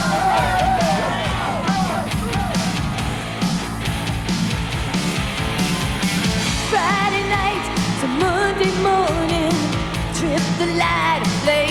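From start to finish the audio carries crude rate conversion: samples were stretched by simple linear interpolation rather than a proper filter, and the sound fits a 3:2 step from 32 kHz up to 48 kHz. The repeating interpolation error sits around 30 dB below the signal and forms shifted, inharmonic copies of the material, a gritty, inharmonic fizz riding on loud and bright passages. Unlike broadband quantisation hiss, it rises and falls with the signal and vanishes in quiet moments.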